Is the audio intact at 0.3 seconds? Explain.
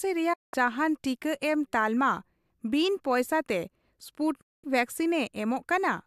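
Yes, but only just. A digital broadcast dropout begins at 0.33 s and lasts until 0.54 s. The receiver stopped getting valid frames and muted. The speech fades out over about 8 ms into a silent hole of roughly 190 ms, which points to several consecutive lost frames, then returns.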